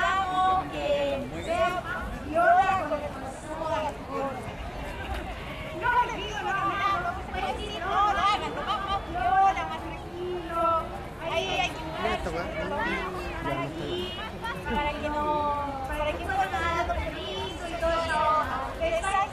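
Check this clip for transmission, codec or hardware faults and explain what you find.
One hardware fault is present: sample clock jitter from 4.83 to 6.98 s. An unsteady converter clock, wobbling by around a microsecond or two, times samples early or late, so errors grow with waveform slope. It adds a roughness roughly 40 dB below the sound, which, unlike a steady noise floor, rises on loud, bright passages and disappears in silence.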